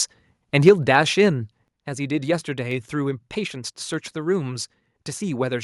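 A speech recording whose microphone input was likely set too high, so at 0.67 to 0.69 s the loudest peaks drive the converter about 3 dB past its limit and around a tenth of the samples in that stretch are flattened. This microphone overload gives the peak a brief harsh, crackling edge as the squared-off waveform tops spray distortion across the spectrum. Right after it, the call software most likely reacted to that clipping by stepping the microphone volume down. At 0.69 to 0.70 s the whole signal, voice and background together, falls by about 4 dB in one abrupt step. A second step at 1.68 to 1.69 s takes it down by about another 5 dB, leaving the level noticeably lower for what follows, with no gradual fade to hide the change. Later, the stream likely lost a handful of samples at 2.71 s and again at 3.94 s. Each gap is only a fraction of a millisecond, far too short to remove any audible sound, but the waveform jumps straight from one value to a later one. 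Each of these dropped samples is heard as a single sharp click and shows as a thin vertical line running up the spectrogram.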